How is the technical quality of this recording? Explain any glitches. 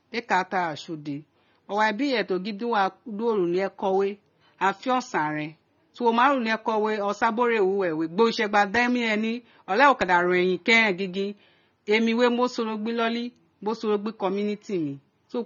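The recording is noticeably degraded by lossy coding throughout. The speech carries AAC compression artefacts, most likely from AAC-LC at a low bitrate, which fits roughly 24 kbps. The encoder spends too few bits on the spectrum, so it discards everything above 6.9 kHz and coarsely quantises the rest. The result is dull, band-limited speech with plainly audible smearing and a fizzy, warbling texture on sibilants and sustained sounds.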